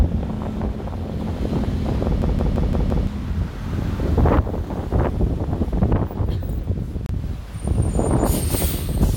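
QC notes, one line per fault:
2.22–3.07 s, system hang loop: a 171 ms slice of audio repeats exactly five times, a machine-gun stutter at about 5.9 Hz, as the system froze while the hardware kept replaying its ring buffer, which fits an 8192-sample buffer; roughly a second of audio is lost.
7.06–7.09 s, gap at a join of encoded pieces: a 31 ms silence cuts into continuous sound with smeared edges, then the audio resumes where it stopped, because separately encoded pieces were joined with their start delay and end padding left in.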